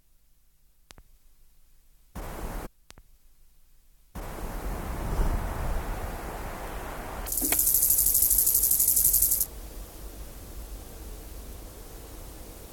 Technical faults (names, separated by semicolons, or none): stream segment repeated